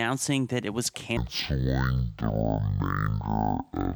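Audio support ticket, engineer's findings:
Stereo read as mono, 1.17 s to end. Speech drops to half speed, octave low. Likely cause: channel-count mismatch in decoder/reader; interleaved L/R samples consumed as one channel. Spectrogram: harmonics halved, faint mirrored copy in upper band. Waveform: stretched.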